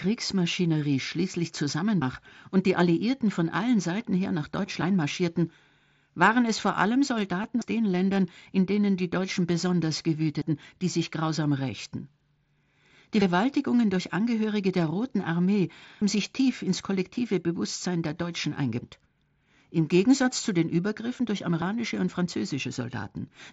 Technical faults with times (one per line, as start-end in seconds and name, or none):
2.02 audio missing between chunks
7.43 concealed Bluetooth headset packet loss
7.62 audio missing between chunks